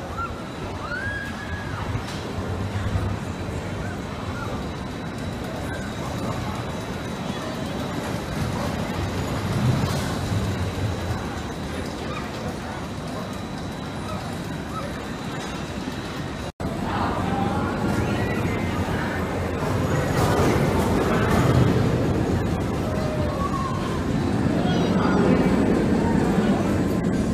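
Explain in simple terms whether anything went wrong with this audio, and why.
Three tiny jumps forward in the sound, at 0.86, 2.89 and 20.21 seconds. The first two skip roughly a hundredth of a second, and the one at 20.21 skips about twice that. This is likely a dropped buffer (overrun): the recording software didn't collect a small chunk of audio in time, so it was overwritten and lost. The sound on either side was joined directly, with no gap of silence, which causes the jump.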